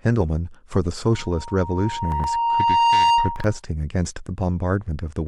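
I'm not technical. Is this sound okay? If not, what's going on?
No. A microphone is picking up its own loudspeaker, causing loudspeaker feedback squeal: a single tone near 934 Hz swells over about two seconds from 1.11 to 3.60 s, ending louder than the speech.

Separately, short pieces of audio played out of sequence (chunks out of order): from 2.12 to 2.24 s and 3.36 to 3.44 s, brief jumbled moments.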